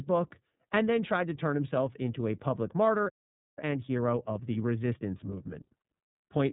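Right from the start the whole clip has that iLBC codec sound. Nothing comes through above about 3.8 kHz, and the speech is clear but a bit rough and synthetic. The plainly audible damage fits the 30 ms frame mode at roughly 13 kbps.

At 3.09 s, just after "into a public martyr", the audio simply drops out for about half a second, coming back at 3.58 s. That's a playback stall, most likely the player running dry on data or its thread getting blocked until it recovered.

From 3.58 s to 6.44 s there's a time-compressed catch-up. The player works off its backlog by snipping out and cross-fading tiny pieces, so the speech runs about 1.15 times too fast at its normal pitch.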